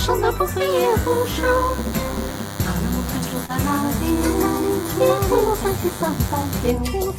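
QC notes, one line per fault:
0.70–6.71 s, DECT cordless phone buzz: A steady, thin, wiry buzz sits under the sound for nearly the whole clip, pitched at 100 Hz and rich in harmonics, roughly 15 dB below the wanted signal. The cause is a DECT handset or base station close to the equipment, firing a short radio burst every 10 ms. The audio circuitry rectifies those bursts, turning the 100 Hz burst rate into an audible tone.
3.45–3.50 s, short concealed packet loss: A brief smear or wobble is heard, with the sound seeming to hang or blur for a moment before blending back into the real audio. About 20 ms of audio never reached the decoder in time, and the receiver papered over a gap of about 30 ms by extending the last sound it had, pitched if it was tonal or as shaped noise if not, then crossfading back into the real signal. Any very short sound in that window can be lost entirely.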